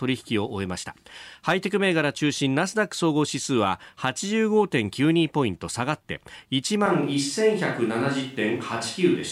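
At 6.86 s the speech turns suddenly hollow, roomy and thin to the end at similar level, likely a switch to a distant microphone.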